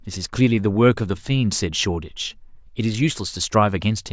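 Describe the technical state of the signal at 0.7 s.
At 0.7 s the speech signal is intact, with no audible fault at that moment.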